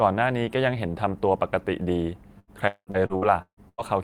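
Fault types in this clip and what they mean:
Repeated packet loss (robotic sound): packets went missing or arrived late seven times between 2.39 and 3.81 s, and each gap (longest 195 ms) was filled by extending the last sound. The speech turns choppy and robotic there, with 44% of that stretch made up of patched-in sound.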